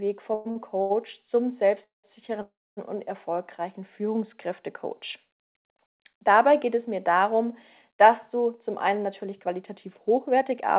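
At 0.34 s a call audio freeze begins. The last sound is drawn out as a fading buzz for about 0.13 s, likely because packets were held up and the jitter buffer ran empty. Unlike a dropout, the audio resumes where it stopped. Two short stalls from late packets follow at 0.51–0.58 s and 0.82–0.92 s. Each holds a sound too long by only 48 ms and 82 ms, with a slight buzz or dip. Longer freezes come at 1.84–2.06 s and 2.42–2.79 s, where the buzz decays into about 160 ms and 260 ms of silence. From 8.55 s to 10.77 s a jitter buffer speed-up runs the audio about 5% fast at unchanged pitch, trimming roughly a tenth of a second. The band stops at 4 kHz, which fits a G.711 call codec.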